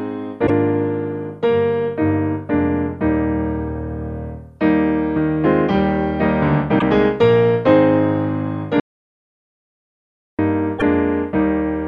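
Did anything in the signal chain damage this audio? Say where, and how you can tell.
Yes. Brief glitches at 0.43–0.50 s, 6.75–6.82 s and 10.75–10.82 s point to damaged data in a compressed stream. Corrupted bytes at the codec or storage stage make the decoder lose frame sync and jump to the next header.

From 8.8 s to 10.39 s the audio cuts to silence for about 1.59 s, with no room tone, then resumes mid-flow. This audio dropout to silence most likely came from a failed input device or link while the recorder kept writing silence.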